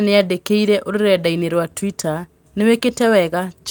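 Listening to the speech in this clip, nothing stood out as a technical problem.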